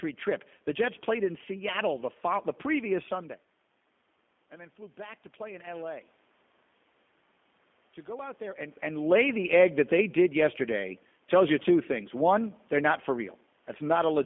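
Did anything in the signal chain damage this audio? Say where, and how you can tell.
Yes. The damage is at the codec stage: the G.729 codec, present for the whole clip. The speech is confined to roughly 200 Hz to 3.5 kHz and sounds plainly rough and synthetic. That fits an 8 kbit/s coder that rebuilds each frame from a vocal tract filter, pitch predictor and sparse pulses instead of the waveform. The level changes near 3 s and 8.5 s come from the talker moving, not from the chain.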